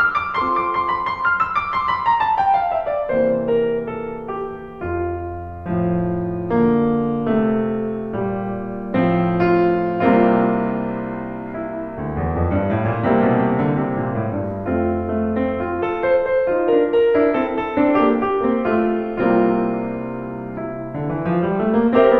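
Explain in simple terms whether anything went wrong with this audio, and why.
Nothing went wrong with this music recording that a listener can pick out. Every moment of it sounds as it should, with no dropouts, jumps or unexpected changes along the way.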